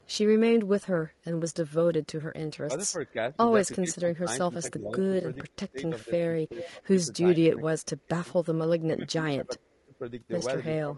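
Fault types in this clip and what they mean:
Low-delay AAC compression: The speech sounds rough and grainy from start to end, and the damage is plainly audible. There is hiss between the harmonics, and the top band sounds dull or synthetic. This is likely a low-delay codec of the AAC-ELD kind used in video calls. Its short frames resolve pitch harmonics poorly and spend bits fast. The sound points to a low bitrate, around 32 kbps.
Echo leak: A delayed copy of the speech comes back about 397 ms late. From 0.01 to 0.16 s it is very faint, about 40 dB below the speech. From 6.62 to 6.67 s it is much clearer, only about 15 dB down. It likely comes from a far end playing the call on a loudspeaker. That side's echo canceller let part of its microphone pickup through and sent it back.
Speech suppressed in double talk: The talker's level drops in patches. From 2.65 to 6.83 s it dips by up to roughly 20 dB, for about two seconds in total. 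From 7.5 to 8.28 s it falls by roughly 30 dB for about half a second. From 8.91 to 10.01 s it drops by roughly 25 dB for about a second. Both sides were likely talking at once. The echo canceller then pulled everything down.
AAC frame loss with concealment: Two brief smeared, phasey patches appear, at 5.21 s and 10.39 s. Each lasts about 20 ms. The sound points to a single lost frame in each case. The decoder filled each gap by reusing the last good spectrum. That keeps the sound going but blurs it. Neither loss lasts long enough to fade into silence. Each one passes as a short rough smudge.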